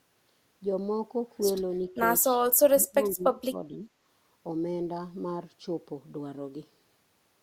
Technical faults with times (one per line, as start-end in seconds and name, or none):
2.41 dropped samples
2.73-3.88 speech suppressed in double talk